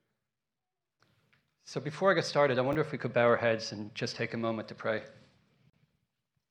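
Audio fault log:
2.73–2.75 s, chunks out of order: a 10 ms block of audio arrives one block late and plays after the block that should follow it. Nothing is missing, but the swapped order creates three hard joins, heard as a brief jumbled stutter.
5.70–5.73 s, gap at a join of encoded pieces: two separately encoded sections are butted together untrimmed, so the encoder's start-up delay and last-frame padding remain as a silence of about 36 ms. Its edges are smeared by the codec, and the sound then resumes where it stopped.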